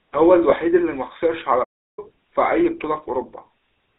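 The clip is speech heard through the GSM full-rate codec from start to end. The sound is buzzy and gravelly, and the codec damage is plainly audible. The band runs only from about 300 Hz to 3.7 kHz, so the top end is gone and the low end is thin. This fits GSM full rate at 13 kbps. That codec rebuilds the voice from a vocal-tract model fed by coarse, regularly spaced pulses, which leaves the rough, grainy texture. From 0.50 to 0.53 s there are lost GSM frames. The sound briefly takes on a rough, metallic ring. The gap is about 20 ms, which fits a single lost frame. The decoder filled it by repeating the last good frame's settings. The loss is short, so the ring is brief and does not fade fully to silence. A playback stall runs from 1.64 to 1.99 s. The sound stops mid-flow and the output is silent for about 0.34 s. The likely cause is the player running out of data, or its thread being blocked, until it recovered.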